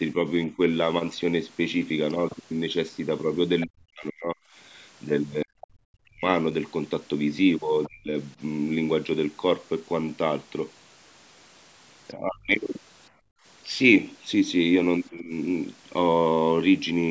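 Speech that dips and breaks up in three stretches: briefly from 0.14 to 0.59 s, then deep cuts of tens of decibels totalling around two seconds between 3.66 and 8.14 s, and again, briefer, between 12.15 and 15.31 s. This is likely speech suppressed in double talk, with the echo canceller turning the talker down while the far end spoke. Faint scraps of a second voice, well below the talker, appear at 3.61–3.66 s, 7.84–7.89 s and 12.09–12.13 s, likely the other side's voice leaking through from the loudspeaker past the canceller. From 13.11 to 13.44 s the room sound drops by about 27 dB and returns, background gated by the echo canceller clamping the microphone during playback.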